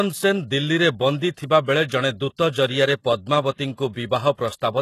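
Throughout, the speech has a bright but synthetic top end, and nothing sounds above 12.3 kHz. This is likely HE-AAC compression, heavily damaged, which fits a low bitrate of around 16 kbps. The treble is rebuilt from copied lower bands. S sounds turn gritty and metallic.

From 3.92 to 3.96 s, a pre-echo appears. A short hiss runs about 39 ms ahead of a sharp attack. The codec spread its noise across the whole block, including the quiet moment before the onset. The attack sounds smeared.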